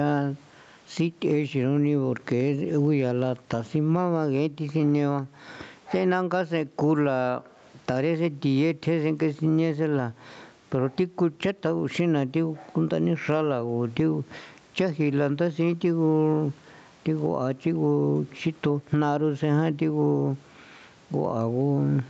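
Gain pumping runs through the whole speech recording. The room noise sits normally about 44 dB below the speech, and the gain swings by around 15 dB. The likely cause is microphone gain set far too high, with a fast limiter clamping each peak.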